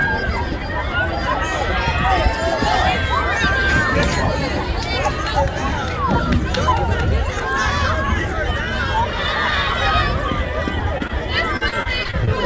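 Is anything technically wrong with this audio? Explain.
Yes. Short concealed packet loss occurs at 10.98–11.02 s and again at 11.08–11.11 s: audio arrived too late, so the receiver extended the preceding sound, leaving brief smears or wobbles. From 11.57 to 12.29 s, repeated packet loss (robotic sound) sets in, with about seven concealed gaps, the longest near 40 ms, patching roughly a quarter of that stretch. The result is choppy audio with pieces missing, over a call path that carries nothing above 8 kHz.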